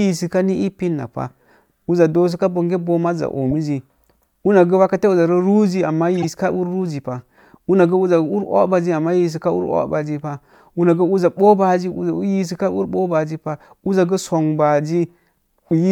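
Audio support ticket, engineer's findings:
Short artifact at 3.51–3.53 s, error peak around -20 dBFS; louder, longer artifact at 6.16–6.31 s. Corrupt frame decoded: decoder played bit-damaged frames, misread gains and codes spraying energy into wrong bands.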